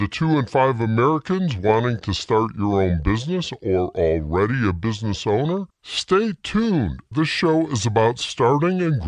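From the very start to the end, the whole thing is running slow and low, a classic wrong sample rate. Nothing was resampled, so speed and pitch dropped together: everything plays at about 0.73 times normal speed and sits roughly 5.5 semitones flat, which fits 44.1 kHz material being clocked out at 32 kHz. You hear it as a sluggish, dragged-down heaviness across the entire clip, with every event stretched out and pitched darker.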